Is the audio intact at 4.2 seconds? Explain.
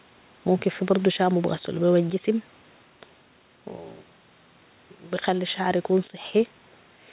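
No. At 4.2 seconds, as throughout the clip, there is gain pumping: the gain swings by around 5 dB, leaving levels squashed. The likely cause is excessive microphone gain held down by a fast limiter or compressor.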